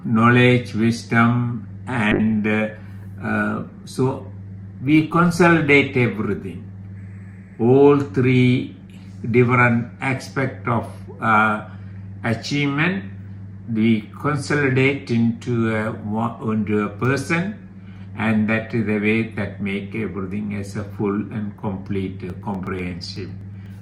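From 2.13 s to about 7.03 s there's a call bitrate drop: the bandwidth estimate fell and the encoder went from 128 kbps down to 24 kbps, sitting at that floor for roughly 4.8 s. With so few bits, everything gets coded much more coarsely, so the sound turns rough and a bit watery, with the top end noticeably dulled. It only opens back up once the rate recovers after 7 s.

Then from 22.30 s right to the end you get periodic USB or driver dropouts. Every 0.124 s, about eight times a second, something in the background stalls the bus or audio driver and a tiny slice of audio is simply skipped rather than padded with silence. That leaves a steady train of little ticks that you only hear where there's signal underneath.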